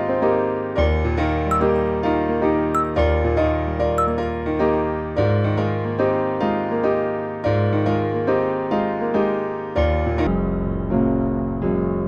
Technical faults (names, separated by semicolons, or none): section at the wrong speed